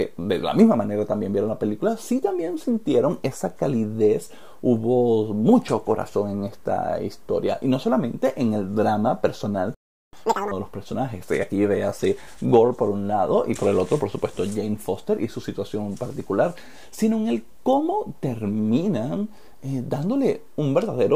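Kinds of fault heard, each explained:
Playback stall: the audio cuts out for about 380 ms from 9.74 s, likely the player starving for data or its thread getting blocked.
Catch-up at higher speed: right after, from 10.13 to 10.51 s, it plays at double speed, pitch jumping roughly ten semitones, then settles back.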